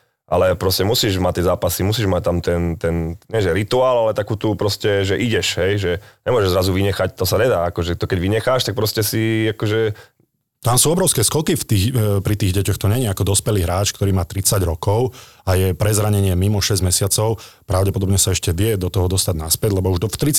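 No technical faults can be heard anywhere in this recording.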